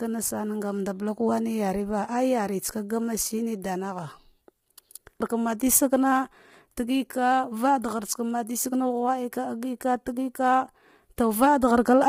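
From start to finish, the speech sounds rough and grainy. Noise fills the gaps between the harmonics of the voice. Nothing is present above 15.7 kHz, and the top band sounds thin and somewhat synthetic. This is likely low-delay AAC compression, the AAC-ELD type used in video calls. Its short frames separate pitch harmonics poorly and spend bits inefficiently. The heavy damage points to a low rate, around 24 kbps.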